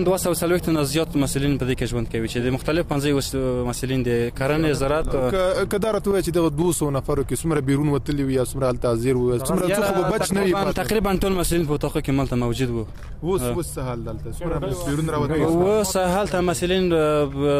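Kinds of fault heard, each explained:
Block of digital silence: at 10.11 s the sound drops to nothing for about 0.73 ms, consistent with a 32-sample buffer going unfilled, and returns with no fade. Being so short, it comes across as a tick or dip, not a hole, unlike a gradual fade-out dropout.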